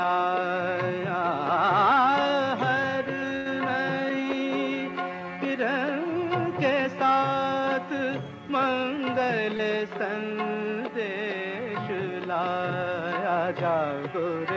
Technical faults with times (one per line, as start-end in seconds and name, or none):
3.36-3.48 short stall from a late packet
9.57-9.61 short concealed packet loss